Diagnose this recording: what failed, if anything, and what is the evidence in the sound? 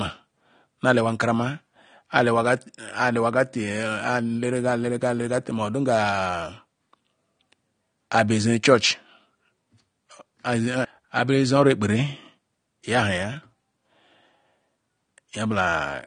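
The failure is at the codec stage, likely AAC compression. Throughout the speech, nothing survives above 9.7 kHz, and the damage is plainly audible as dullness and smearing. That fits AAC-LC at a low bitrate, around 32 kbps. On a spectrogram there is a flat, hard ceiling at 9.7 kHz.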